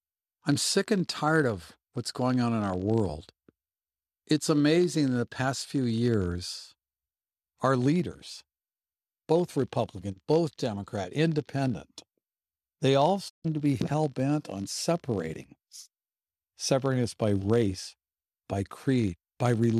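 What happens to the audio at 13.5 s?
Right around there the speech is just coming back from a digital broadcast dropout that runs from 13.28 to 13.46 s. The receiver lost good frames, either from a weak signal or failed checksums, and muted until clean data arrived again. You hear the sound fade out over about 20 ms and then a hole of roughly 144 ms, which fits a short run of lost frames. Whatever was transmitted in that gap is simply gone.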